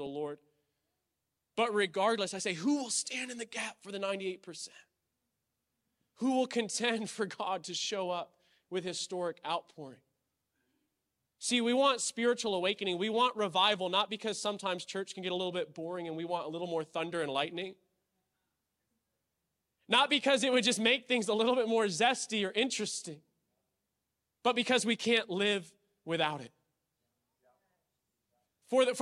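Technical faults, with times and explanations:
No technical faults detected anywhere in the speech recording.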